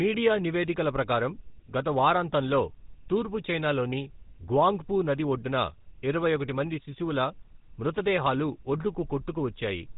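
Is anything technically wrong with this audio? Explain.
Yes. Throughout, the speech has passed through a GSM full-rate codec, which fits a rate of about 13 kbps. It models the vocal tract and excites it with sparse, evenly spaced pulses, discarding everything above 3.8 kHz. The result is plainly audible buzzy, gravelly roughness and a muffled top end.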